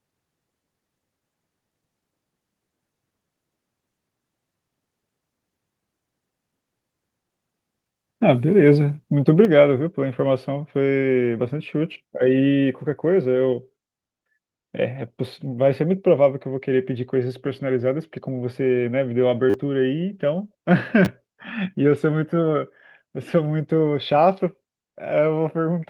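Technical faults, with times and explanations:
9.45 s, microphone volume stepped down: speech level drops by about 5 dB in one step, likely the call software cutting input gain.
19.50–19.54 s and 21.05–21.07 s, repeated buffer: short buzzing stutters where a segment replays four then two extra times, fitting a 10 ms buffer, losing around 40 ms and 20 ms.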